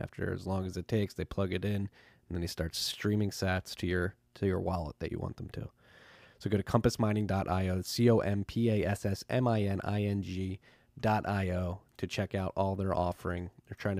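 A speech recording, and nothing is technically wrong with it.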